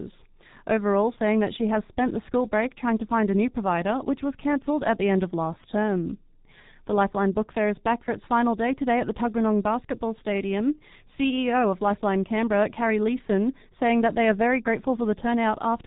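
G.723.1 codec damage runs throughout the speech: nothing above 3.8 kHz survives, and coarse 30 ms frames, consistent with roughly 6.3 kbit/s, leave it muffled, hoarse, with smeared consonants.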